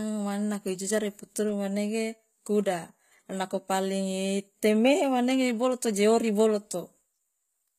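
From start to finish the speech carries plainly audible codec damage: the treble sounds bright but synthetic, and s sounds come out gritty and lispy. The likely cause is HE-AAC compression at a very low rate, consistent with roughly 20 kbps, where the upper band is rebuilt by copying lower bands upward rather than coded directly. On a spectrogram, the upper region shows blocky, repeated patches that don't line up with the harmonics below, and everything stops sharply at 14.9 kHz.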